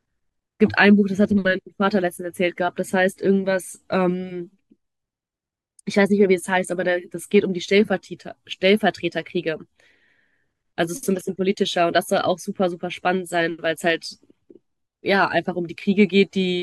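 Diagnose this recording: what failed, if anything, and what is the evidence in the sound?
Nothing failed, and the sound gives no evidence of any fault at any stage.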